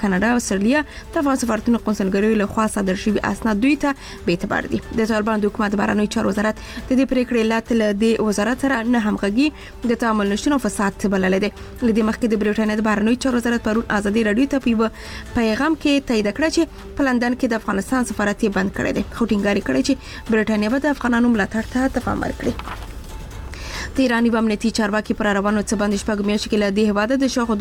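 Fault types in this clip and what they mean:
No faults can be heard anywhere in the clip, and its technical state shows nothing that calls for comment.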